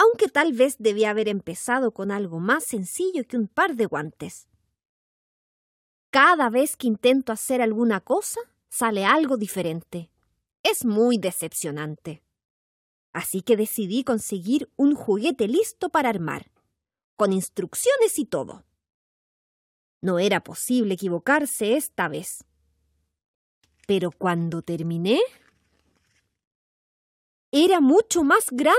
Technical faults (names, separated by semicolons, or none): none